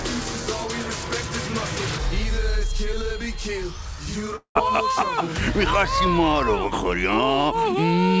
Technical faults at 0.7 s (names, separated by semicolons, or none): none